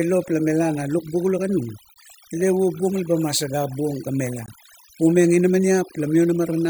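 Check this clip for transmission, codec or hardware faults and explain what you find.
Two faults are present. One affects the whole clip, and the other occurs twice.

Overdone noise removal runs throughout the speech. The noise reduction is set too strong. It cuts individual frequency bands whenever they sit near its noise estimate, taking quiet parts of the voice with them. The background drops and breaks up into twinkling specks.

A gap between chunks appears at 1.94 to 1.96 s and again at 4.46 to 4.48 s. Each hole lasts 20 ms. The audio was handled in chunks of about 2.5 s, and silence was inserted at each join. Nothing is lost, but the sound is interrupted by a short hole at each join.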